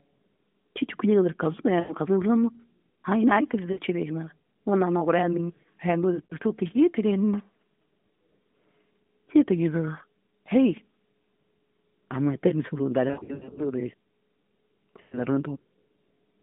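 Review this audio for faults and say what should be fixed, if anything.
Lost AMR speech frames at 1.80, 3.72, 6.26, 13.08–13.74 and 15.02 s. The decoder stretches the last good frame, and the speech fades briefly. Stronger radio error protection or a better link would prevent it.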